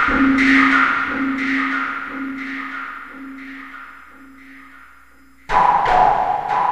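No technical faults can be heard anywhere in these sounds, and the signal keeps a steady, intact technical state throughout.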